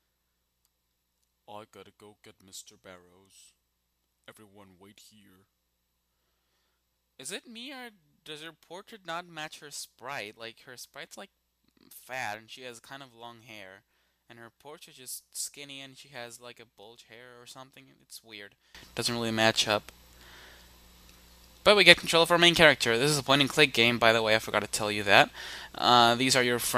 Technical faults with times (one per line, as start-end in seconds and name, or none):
0.00-18.75 one channel inverted